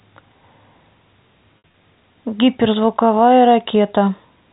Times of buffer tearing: none

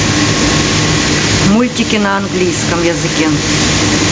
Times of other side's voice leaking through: none

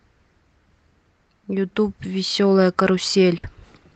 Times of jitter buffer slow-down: none

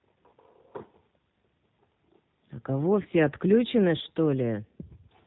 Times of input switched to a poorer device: none

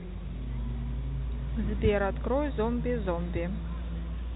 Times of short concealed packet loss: none

